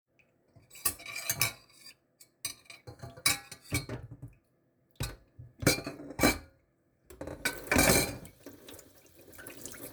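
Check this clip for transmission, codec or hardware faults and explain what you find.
The signal in this recording of sounds stays continuous and steady throughout, with nothing in it that points to a fault anywhere along its path.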